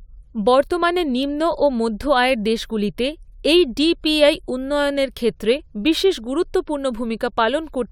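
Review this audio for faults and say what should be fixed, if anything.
Nothing here needs fixing; I didn't catch a single fault anywhere in the recording.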